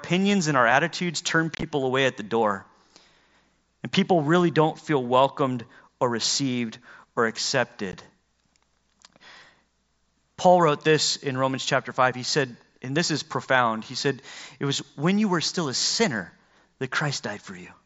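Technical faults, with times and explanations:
1.55–1.63 s: unconcealed Bluetooth headset packet loss. About 52 ms of speech drops out in scattered gaps over 75 ms, the longest 22.5 ms, heard as rough chop.
7.92 s: unconcealed Bluetooth headset packet loss. A 15 ms hole with abrupt edges, which fits two lost mSBC frames replaced by silence rather than concealed.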